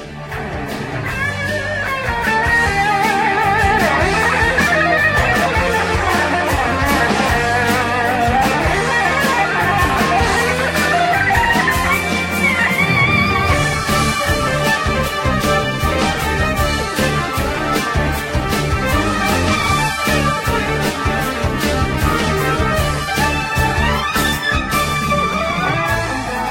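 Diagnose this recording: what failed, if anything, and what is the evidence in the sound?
Nothing stood out on listening that would point to a failure at any stage of the chain.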